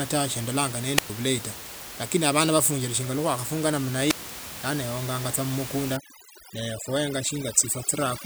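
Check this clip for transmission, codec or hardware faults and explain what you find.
Two kinds of fault are present in this speech recording.

Wireless microphone squelch dropouts occur at 0.96–1.10 s and 4.08–4.23 s. In each, the radio signal fades, hiss rises briefly, and the receiver's squelch mutes the output for roughly 110 ms and 116 ms, before speech resumes with "bulayi tawe lakini abana" after the first.

Overdone noise removal runs from 5.97 s to the end. Suppression set too aggressively pulls bands near the noise estimate down, so the room noise, previously about 11 dB below speech, drops and breaks up into twinkling specks.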